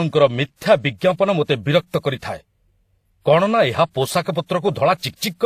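Speech carrying two distinct kinds of codec smear throughout, cut off above 14.9 kHz, likely transcoding between lossy codecs rather than a single low-bitrate encode.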